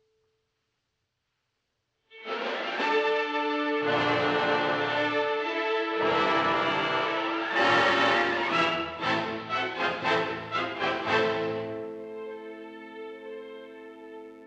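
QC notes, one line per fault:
10.19–14.46 s, mains buzz: a faint, steady raspy buzz built on 50 Hz, from sharp switching spikes twice per cycle spreading harmonics into the kilohertz range.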